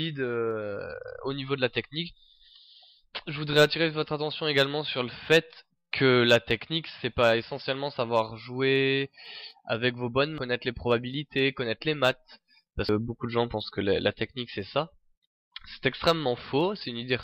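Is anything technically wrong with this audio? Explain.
Yes. Compressed frames were skipped at 10.38 s and 12.89 s: whole frames were lost or rejected by the decoder, so the audio jumps ahead, roughly 0.4 s and 0.3 s, about four and three frames of roughly 93 ms.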